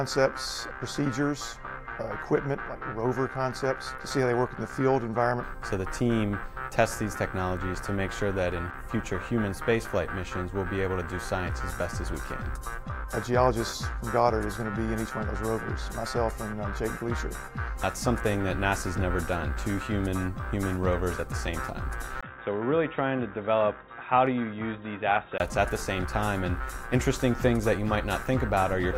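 Input switched to a poorer device, from 22.21 to 25.40 s: after a 20 ms gap the sound turns dull and boxy, with nothing above 3.8 kHz, a level drop of around 5 dB and a new noise floor, likely a change to another microphone or headset profile.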